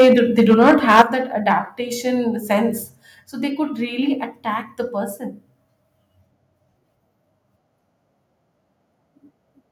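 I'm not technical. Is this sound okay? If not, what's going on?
No. For the first second, up to 1.02 s, the speech sounds harsh and crackly, with a rough edge on the loudest parts, and there is a shorter crackle at 1.5 s. This is microphone overload, likely from the microphone's input volume being set too high, so the loudest moments get their tops sliced off.

At 1.02 s and again at 3.06 s, just before "so they could really", the voice and the background both drop suddenly to a quieter level. This is the microphone volume being stepped down, likely by the call software turning the input down in one jump after hearing it was too loud.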